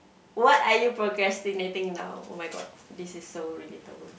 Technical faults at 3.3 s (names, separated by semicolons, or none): none